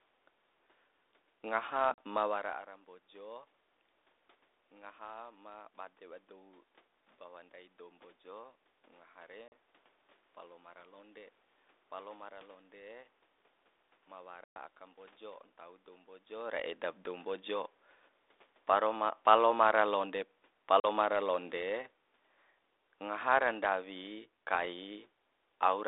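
Speech on a narrowband call, with four hard-edged silent holes: about 40 ms at 1.94 s, just before "ma wara ara mbojo", 9.48 s and 20.8 s (after "paro palomara londe"), and a longer 120 ms gap at 14.44 s, ahead of "aka mbojo ntau dou". After each gap the sound returns with brief distortion that clears within tens of milliseconds. This is packet loss on an ADPCM call, consistent with G.726 at 32 kbit/s. Dropped packets were filled with silence, leaving the decoder's predictor and step size out of step with the sender's until they re-converged.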